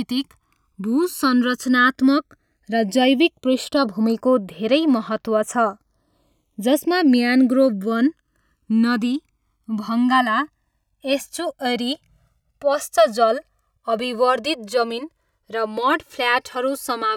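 Channels drifting apart throughout: clocks roughly 200 ppm apart let the inter-channel delay creep to about 2 ms, so mono sums flange slowly.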